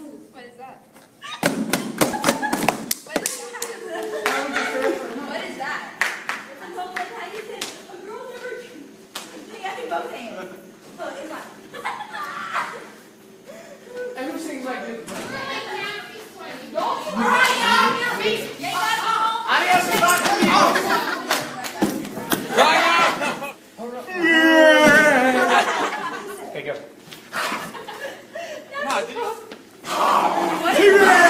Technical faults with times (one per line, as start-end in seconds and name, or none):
none